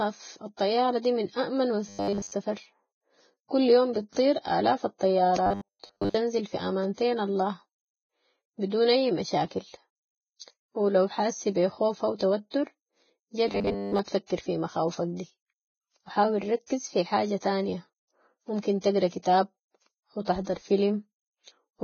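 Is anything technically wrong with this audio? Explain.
Yes, three kinds of fault are audible in this speech clip.

Throughout, there is heavy Vorbis compression damage. The high-frequency cut-off is lowered. The treble that remains is coarsely quantised, so fine detail turns into hiss and grain. That points to a very low bitrate, likely around 14 kbps.

From 1.89 to 2.32 s (just after "الطيارة دي من اامن"), from 5.47 to 6.14 s (just before "في امانتين الله"), and from 13.48 to 13.99 s, there is robotic sound from repeated short buffers. Most of the sound in these stretches is a repeat. It likely comes from one 10 ms chunk being replayed while fresh audio is late. That sets a rigid 100 Hz metallic buzz.

From 16.67 to 16.70 s, between "و حاول" and "في حاجة تانية ممكن", there is pre-echo. The codec spread its quantisation noise across the whole block, so the noise meant for a loud attack leaks about 32 ms ahead of it. 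A brief hiss precedes the onset, and the attack sounds smeared.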